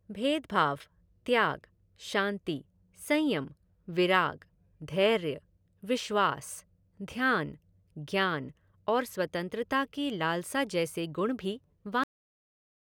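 At 12.04 s the speech suffers a cut-off end: the final buffers never reached playback, so sound stops mid-utterance and drops straight to digital silence without decay.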